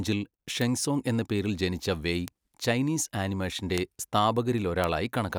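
At 0.62 s, just before "സോങ് എന്ന പേരിൽ ജനിച്ച", there's a bit error spike: a single sharp tick peaking around -14 dBFS. Another follows at 2.28 s, right after "എന്ന പേരിൽ ജനിച്ച വെയ്", at a similar level. Then come two louder ones, near -8 dBFS, at 3.78 s and 4.84 s. Each sounds like one flipped bit that throws a sample or a few by a power of two and snaps straight back, so it's a broadband click that has nothing to do with the speech.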